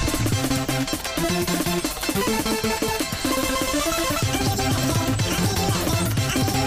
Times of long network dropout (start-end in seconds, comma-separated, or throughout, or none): none